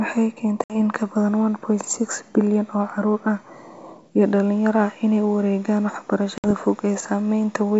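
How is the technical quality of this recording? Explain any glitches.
Two short dropouts mark the recording. The wideband sound has the clarity of G.722 coding up to about 7 kHz, with the faint upper-band hiss of a full-rate stream, likely 64 kbit/s.

Both glitches are packet loss on an ADPCM call. They fall at 0.64 to 0.75 s and at 6.38 to 6.51 s. Each gap comes to about 60 ms, roughly several packets' worth. Silence fills it, so the sound stops with a hard edge. ADPCM decodes each sample from a prediction and an adaptive step size. During the gap the receiver's predictor and step size drift from the sender's. When sound resumes, it comes back with brief, slight distortion. It settles within tens of milliseconds.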